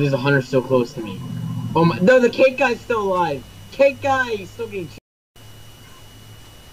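At 4.98 s a playback stall halts the sound mid-flow, leaving silence until 5.36 s, about 0.37 s. The likely cause is the player running short of data or its thread being blocked. The output stops outright rather than dipping or fading.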